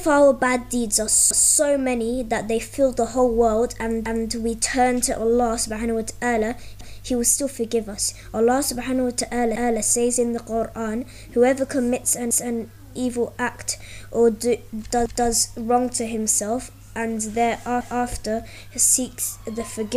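Overlapping chunks make a 250 ms stretch of the audio play twice at 1.31, 4.06, 6.81, 12.31, 15.06 and 17.81 s, giving a regular stutter. Each 2.5 s chunk starts a quarter-second before the previous one finished, so every join repeats material.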